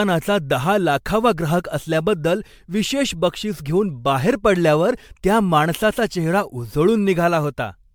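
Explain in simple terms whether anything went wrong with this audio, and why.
Throughout the speech, the sound is swirly, hollow and smeared, with blurred consonant attacks. That points to generation loss, likely from being re-compressed as MP3 several times.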